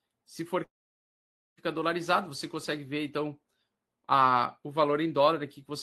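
At 0.63 s the speech cuts out and doesn't return until 1.59 s, nearly a full second gone. You hear a brief buzzy tail as the receiver stretches the last sound, then it fades to near silence for about 0.9 s. That's most likely a long network dropout. Packets stopped arriving, concealment covered only the first moment, and the lost stretch is simply skipped when audio resumes. The call codec's coding noise and a top end near 12 kHz sit underneath throughout.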